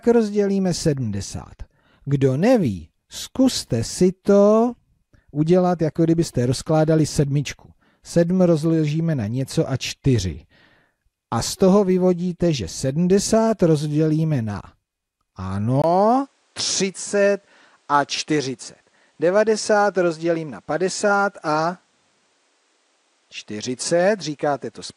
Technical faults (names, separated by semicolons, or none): input switched to a poorer device